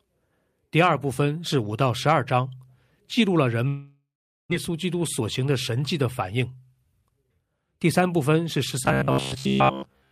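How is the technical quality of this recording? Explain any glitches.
The recording has clear technical problems: a long gap, two stretches of hurried playback, and a metallic buzz at the end.

From 3.67 to 4.53 s there is a long network dropout, likely from audio packets arriving too late or not at all. The receiver stretches the last sound into a fading buzz, then leaves about 420 ms of near silence, and 600 ms of the speech is simply gone when it resumes. The delay seems to shift by about a fifth of a second. On a waveform this shows as a decaying tail into a flat line. A spectrogram shows smeared, blurred energy fading to an empty band.

Jitter buffer speed-up follows twice, at 4.69 to 5.80 s and 6.22 to 7.47 s. After the backlog, the receiver trims its excess buffered audio by cutting out many short pitch-period slices. That runs speech 6% fast in the first stretch, losing roughly 70 ms, and 12% fast in the second, losing around 150 ms. 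The pitch stays put but the talking sounds rushed. A spectrogram shows syllables and harmonic tracks slightly compressed in time, with no frequency shift.

From 8.85 s to the end, the sound turns into a rigid metallic buzz, robotic sound from repeated short buffers. The likely cause is new audio arriving too rarely, so the last roughly 15 ms chunk is looped, which fits a buffer of that length. Most of the real audio is skipped. The loop forces a 66.8 Hz drone. A waveform shows identical repeating blocks, and a spectrogram shows evenly spaced horizontal harmonics at multiples of 66.8 Hz.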